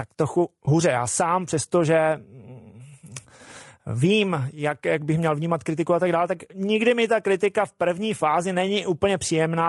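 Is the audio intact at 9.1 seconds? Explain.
No. At 9.1 seconds, as through the whole speech clip, the sound is rough and grainy, with noise filling the gaps between harmonics and a thin, synthetic top band. That is likely low-delay AAC compression at a rate that fits about 32 kbps. It codes about 500 frequency lines a frame with a low-delay window, and at this low bitrate too few bits go to each frame to keep the voice clean.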